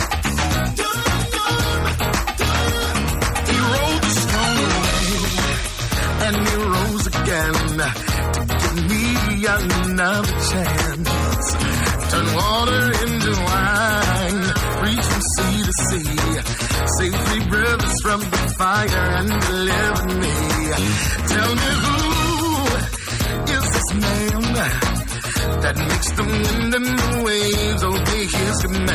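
No technical faults can be heard anywhere in this audio. Nothing in the sound points to a fault at any moment.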